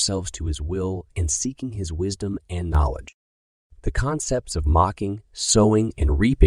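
At 0.35 s the speech abruptly drops about 6 dB and stays lower until 2.75 s, then does the same again from 3.09 s to 5.49 s. This is most likely one channel dropping out: losing a stereo side halves the level of the mono sum.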